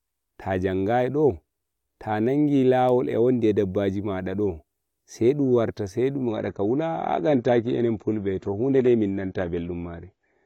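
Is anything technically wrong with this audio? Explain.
Yes. From 6.28 s to the end, the audio drops to an adaptive stream at a lower bitrate. The player switched to a leaner encoding without any gap, so the speech suddenly turns duller and grainier, consistent with about 24 kbit/s AAC. A spectrogram shows a hard ceiling at 7.6 kHz from 6.28 s, while the waveform stays continuous.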